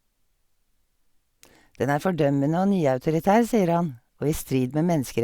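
No technical faults can be heard anywhere in the recording; the speech signal stays continuous and stable throughout.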